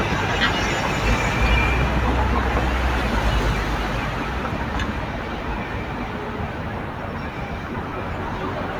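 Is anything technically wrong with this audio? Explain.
Yes. From 7.88 to 7.92 s there are lost LE Audio frames: about 40 ms of sound, which fits four 10 ms frames, went missing, and the decoder filled the gap by replaying the last spectrum with scrambled phase. The result is a brief noisy smear rather than the hard silence or click of a plain dropout. The light lossy compression throughout stays faint by comparison.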